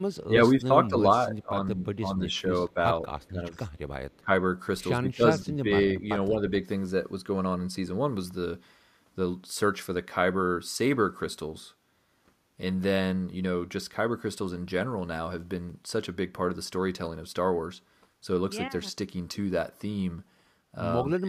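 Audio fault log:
0.26–3.58 s, 4.21–4.3 s, 5.01–6.53 s, 21.04–21.28 s, speech suppressed in double talk: the speech dips by roughly 10 to 20 dB in patches, about one and a half seconds in the first span. Likely an echo canceller attenuating near-end speech while the far end talked.
3.21–3.28 s, 4.11–4.2 s, echo leak: brief scraps of a faint delayed copy arrive 179 ms behind the speech at about 40 dB below it, likely residual loudspeaker pickup that the far-end echo canceller failed to remove.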